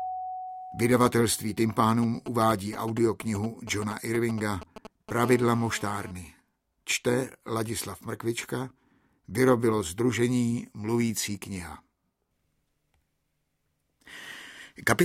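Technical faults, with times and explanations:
2.03–5.24 s: GSM signalling bursts, a galloping dit-dit-dit of brief 217 Hz buzzes, roughly 10 dB below the sound, from a nearby phone's intermittent transmissions being rectified.
5.24–6.11 s: GSM phone buzz, now continuous rather than galloping, a hard raspy 217 Hz tone rich in harmonics about 18 dB down, as the phone transmits steadily in a call.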